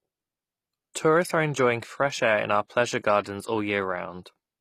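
Speech throughout, with gritty, metallic treble and lispy s sounds, and nothing above about 14.9 kHz. The likely cause is HE-AAC compression synthesising the highs, which fits a bitrate near 24 kbps.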